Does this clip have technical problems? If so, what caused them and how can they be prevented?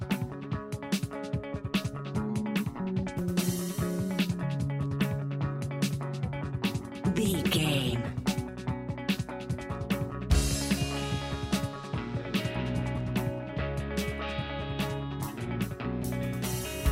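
No, there are no audible technical faults in this clip, so there is nothing to trace or prevent.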